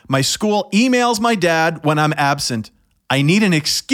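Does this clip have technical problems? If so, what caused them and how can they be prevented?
No, nothing stood out on listening to this speech clip, so there is nothing to trace back or prevent.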